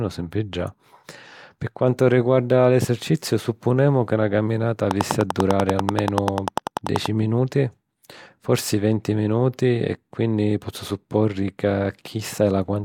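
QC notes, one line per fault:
4.91–7.07 s, train of clicks: just after "supponemu ca na caminata", a regular ticking of about 10.3 clicks per second, some twenty near-identical pulses standing roughly 15 dB above the speech, likely from electrical interference or a faulty connection injecting repeated impulses.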